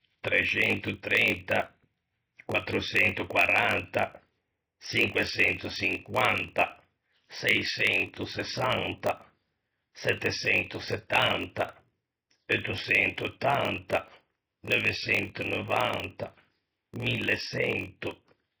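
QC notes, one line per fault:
Throughout: MP3 compression. The speech has a heavy watery, swirling texture, with metallic chirps on s sounds and smeared consonant onsets. This is likely a lossy encode at a very low bitrate, consistent with around 24 kbps. Short of bits, the encoder has dropped weak spectral lines that flicker on and off between frames.
Throughout: block size mismatch (padded). A steady 46.9 Hz buzz sits under the speech, and everything plays slower by a factor of 0.938. One stage is delivering shorter blocks than the next stage reads, consistent with a 1024-sample read block, and the shortfall is filled with zeros. The resulting silent gap in every block produces the buzz at the block rate and stretches the timing.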